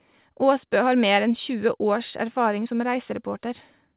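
Clock drift between sender and receiver runs through the whole clip. The sender's clock seems about four percent fast, so the receiver's buffer keeps overfilling. From 0.29 s to 3.96 s, repeated timing corrections trim short pieces to catch up. The speech runs near 104 percent speed, with small, unevenly spaced edits. Nothing is heard above 4 kHz, which fits G.711 mu-law.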